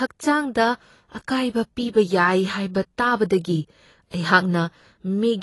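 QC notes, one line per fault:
throughout: AAC compression, likely the cause. Nothing remains above 11.5 kHz, so the speech sounds dull and band-limited, and codec damage is plainly audible because the spectrum in each frame is coarsely quantised. This points to AAC-LC at about 32 kbps.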